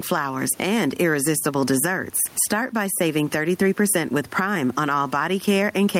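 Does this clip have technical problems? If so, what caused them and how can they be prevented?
Yes. Gain pumping runs throughout this speech. The room noise sits about 36 dB below the speech, and the gain swings by around 10 dB. The likely cause is excessive input gain with a fast limiter clamping each peak. Prevent it by lowering the microphone gain and easing the limiter's attack and release.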